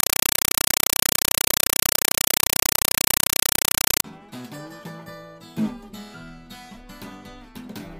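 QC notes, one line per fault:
0.00–4.04 s, compressed stream played as audio: very loud, harsh chattering static replaces the sound, pulsing 31.25 times a second as 5.33 ms bursts of noise with silence between them. A compressed stream, which points to Dolby Digital (AC-3) passed over a digital link, is being read as ordinary samples instead of decoded. Each coded frame becomes a short noise burst followed by zero padding, and the frame rate sets the chatter.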